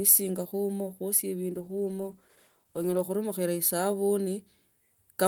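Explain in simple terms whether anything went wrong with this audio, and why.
From about 1.53 to 3.09 seconds the speech goes rough and a bit muffled, then clears up again. That's a call bitrate drop: the connection briefly looked weaker, so the sound was squeezed into much less data and lost its crispness for about a second and a half.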